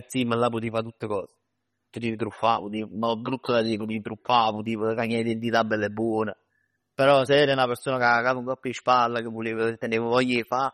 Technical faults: MP3 compression

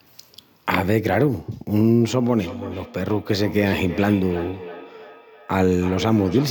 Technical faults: feedback echo between two devices

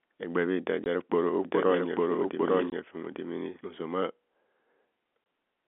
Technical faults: packet loss filled with silence; doubled audio track

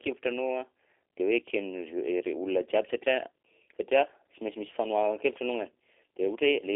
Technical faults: G.729 codec

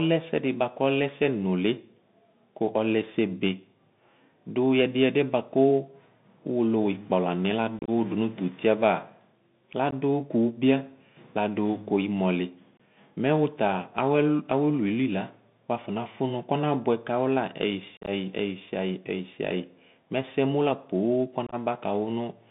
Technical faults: Bluetooth CVSD headset codec; unconcealed Bluetooth headset packet loss

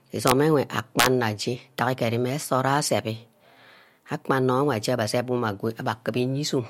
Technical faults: integer overflow

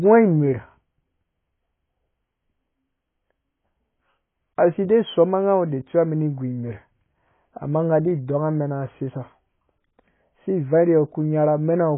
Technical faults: AAC compression

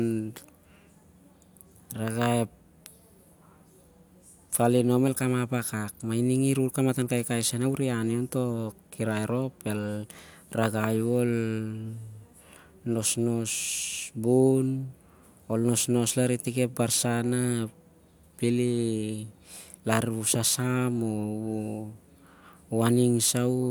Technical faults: none

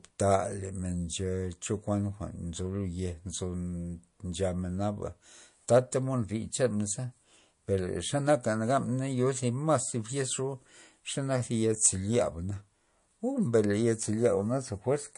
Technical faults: MP3 compression

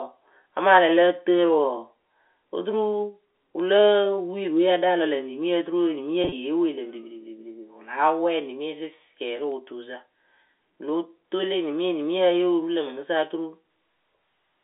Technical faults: packet loss with pitch repetition

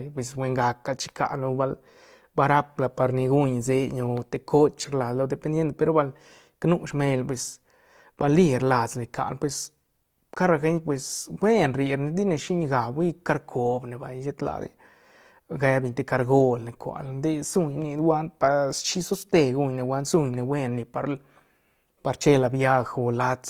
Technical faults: Opus compression

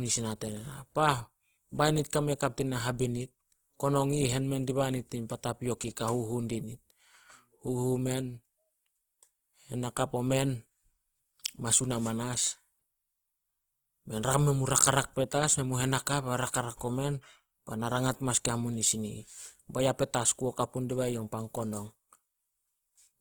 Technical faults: Opus compression

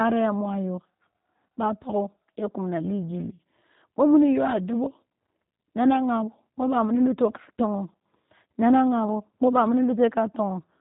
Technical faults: G.729 codec

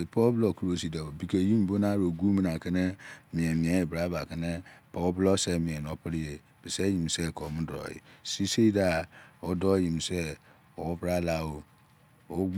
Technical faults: none

